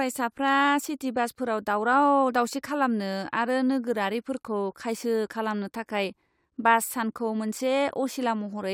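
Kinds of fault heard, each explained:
Nothing stood out on listening to this speech recording.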